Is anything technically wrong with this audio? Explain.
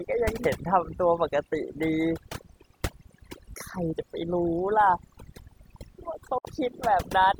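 Yes. Throughout, quiet detail in the speech drops out and the background is reduced to near silence flecked with twinkling specks. This is overdone noise removal: the noise reduction was set so strong that it cuts individual frequency bands near its noise estimate, taking quieter parts of the voice with them.

At 6.38 s the sound drops to silence, with a very fast fade of about 3 ms, and returns at 6.45 s. This is a digital broadcast dropout. The receiver muted for about 64 ms after losing good frames, which fits two lost frames, and whatever was sent during that gap is gone.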